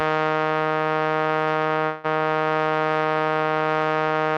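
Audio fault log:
1.85–2.06 s, call audio freeze: the music stalls and its last sound is stretched into a fading buzz or hiss for about 0.19 s, then resumes exactly where it stopped. Nothing is lost, but everything after lands later. Likely packets delayed in transit draining the jitter buffer.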